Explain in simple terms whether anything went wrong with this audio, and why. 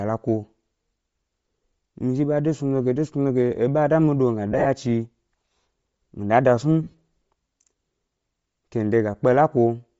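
Bluetooth LC3 compression runs through the whole speech clip: the sound has a breathy, grainy edge that is plainly audible. This is likely from Bluetooth LE Audio's codec, which squeezes the signal hard, throwing away much of the high-frequency detail and filling the gap with noise.

Lost LE Audio frames occur at 4.52–4.66 s and 6.83–6.94 s. In each, small chunks of sound went missing in short bursts, the longest a few hundredths of a second. The receiver covered the gaps by repeating the last sound with scrambled detail, giving a brief noisy smear.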